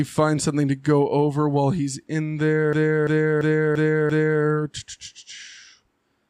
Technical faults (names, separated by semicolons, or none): system hang loop